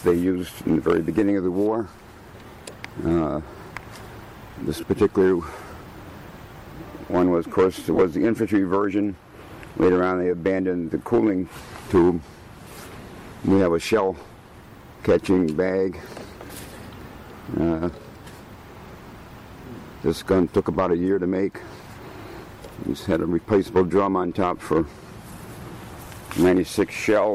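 At 4.80 to 4.83 s, about 22.5 ms of lost LE Audio frames: the decoder fills the gap by replaying the last spectrum with scrambled phase, so the sound briefly becomes a grainy smear. A spectrogram shows blurred, noise-like columns where harmonic detail should be. A second loss, 7.94 to 8.02 s, totals 37.5 ms in short bursts scattered over 75 ms, the longest around 15 ms. The chunks fit roughly 7.5 ms frames, and the waveform shows ragged envelope breaks.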